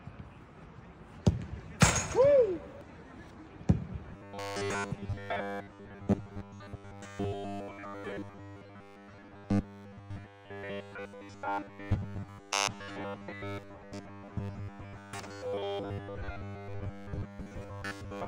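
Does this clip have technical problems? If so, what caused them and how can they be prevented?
Yes. Robotic sound from repeated short buffers runs from 4.13 s to the end at 18.27 s, a rigid metallic buzz at 100 Hz. New audio likely arrived too seldom, so a 10 ms slice was looped for most of that stretch while real material was skipped. A larger jitter buffer and more processing headroom, so fresh audio always arrives before playback runs dry, would prevent it.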